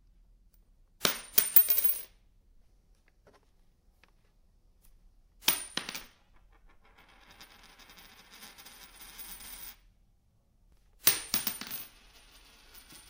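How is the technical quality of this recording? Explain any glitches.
No audible glitches or technical faults in this recording.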